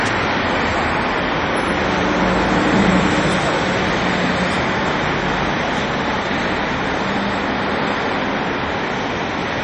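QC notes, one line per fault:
Throughout, MP3 compression: nothing above 10.2 kHz and plainly audible codec damage, likely a starved MP3 encode around 40 kbps zeroing weak detail.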